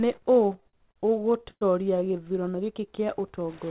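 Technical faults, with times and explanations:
0.56 to 2.25 s, repeated stalls (stutter): the speech keeps catching, about 20 times in this stretch, as late packets let the jitter buffer run dry. Each time the receiver stretched the last sound to fill in, 348 ms in all, the longest hold 104 ms, so nothing's lost but it drags.
2.81 s to the end, jitter buffer slow-down: here the receiver was rebuilding its reserve by repeating single pitch periods and bits of pause, adding 66 ms. The speech plays at about 93% speed with the pitch unchanged, so sounds come out drawn-out.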